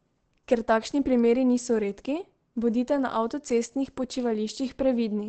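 From start to finish the speech sounds muffled and hoarse, with nothing above about 8.5 kHz. The likely cause is Opus compression at a low rate, which fits something around 16 kbps. At that budget the encoder drops into its speech-oriented SILK mode and caps the band at wideband, so the top end simply vanishes. What's left comes through with a throaty, rough texture rather than any swirling.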